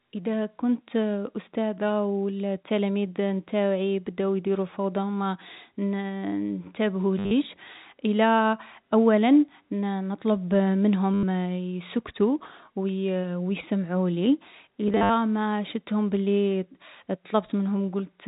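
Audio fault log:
7.19 to 7.31 s, 11.14 to 11.23 s and 14.88 to 15.10 s, packet loss with last packet repeated: each gap was filled by replaying the last good chunk, which fits 10 ms packets. About 110, 90 and 140 ms are lost, with the first and last gaps scattered over 120 and 220 ms in runs of up to 60 and 70 ms. The second gap ends just before "يسكتو و" and the third just before "شفتهم بلي". Because the repeats ignore the pitch period, longer runs buzz at about 100 Hz as a brief robotic stutter. On a waveform this shows as identical 10 ms segments repeated with steps at their joins. On a spectrogram it shows as frozen vertical slices with 100 Hz striping, all within the 4 kHz telephone band.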